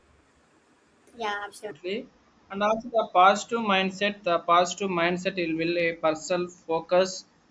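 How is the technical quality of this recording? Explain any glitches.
The recording has one clear fault at the very start. From 0.00 to 1.71 s there is a wrong sample rate: the audio plays about 1.38 times too fast, raising pitch roughly 5.6 semitones, which fits 16 kHz material played at 22 kHz. Speech sounds high and hurried. On a spectrogram, harmonics and formants sit stretched upward, and the waveform looks time-compressed.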